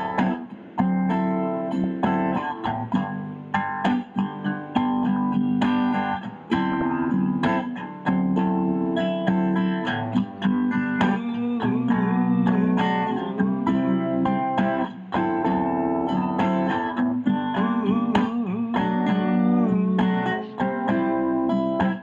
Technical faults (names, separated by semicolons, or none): DAB burbling